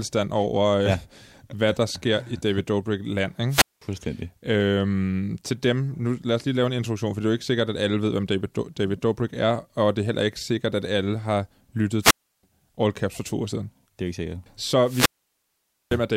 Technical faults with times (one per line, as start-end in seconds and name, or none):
3.49-3.82 wireless microphone squelch dropout
12.01-12.43 wireless microphone squelch dropout
14.83-16.00 wireless microphone squelch dropout